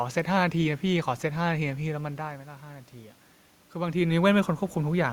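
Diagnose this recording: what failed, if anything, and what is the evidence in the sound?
From 3.73 s to 5.04 s the voice and the room noise behind it swell upward together, slowly, over more than a second. That joint rise is automatic gain rising in the call processing stage: the input level fell by about 11 dB, close to where the talker moves back from the microphone around 4 s. The AGC judged the signal too quiet and ramped its gain up by about 5 dB, lifting the background along with the voice.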